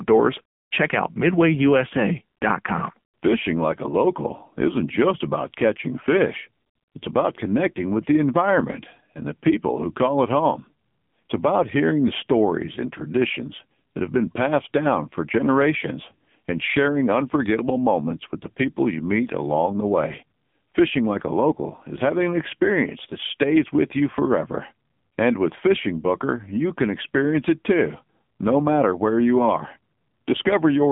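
AMR narrowband mobile codec damage runs throughout: the speech is confined to roughly 150 Hz to 3.5 kHz with nothing above 3.6 kHz, and heavy pulse-driven vocal-tract modelling leaves it buzzy and synthetic, which points to a low mode near 6.7 kbps.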